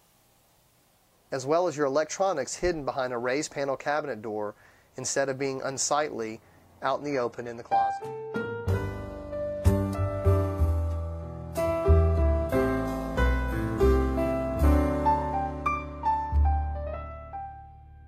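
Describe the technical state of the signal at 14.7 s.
At 14.7 s the signal is still inside a drop to an adaptive stream at a lower bitrate, running from 6.97 s to 14.96 s. The player fell back to a leaner encoding when throughput sagged. The sound points to a shift from a clean AAC stream to a low-rate HE-AAC one, around 20 kbit/s. Treble is cut and nothing survives above 14.9 kHz. Unlike a buffering stall, the switch is abrupt but seamless, with no gap.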